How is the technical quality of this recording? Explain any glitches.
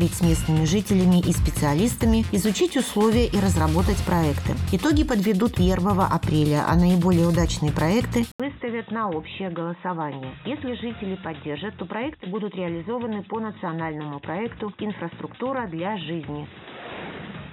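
The recording has one significant fault, covering its second half. An input switched to a poorer device at 8.32 s, likely another microphone or a headset's call profile. After an 80 ms silence, nothing above 3.8 kHz remains, so the sound turns dull and boxy, drops roughly 10 dB, and carries a faint new background noise to the end.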